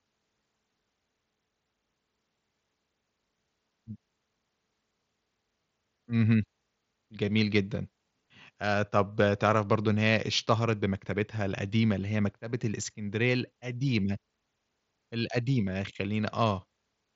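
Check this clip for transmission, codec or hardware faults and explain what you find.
The speech comes through a wideband Bluetooth headset link using the mSBC codec, with content reaching up to about 7.7 kHz and only the light graininess on louder passages that is normal for that codec, and nothing in it points to a transmission, codec or hardware fault.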